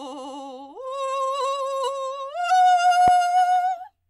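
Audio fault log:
3.08–3.10 s, loud pop: a single sharp pop lands on the music, peaking roughly 10 dB above it, while the music continues underneath unbroken. The likely cause is a sudden voltage step or pulse, such as a plug, switch, static discharge or driver glitch, shaped by the downstream circuitry into a brief thump. On a waveform it shows as one tall, narrow spike; on a spectrogram, as a thin vertical stripe spanning the full frequency range.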